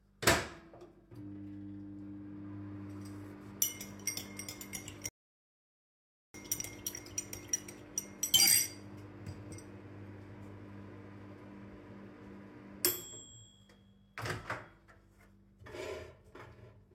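At 5.09 s a rebuffering stall hits: playback runs out of downloaded audio and waits for more, going silent until 6.34 s, then resumes exactly where it stopped, adding 1.26 s.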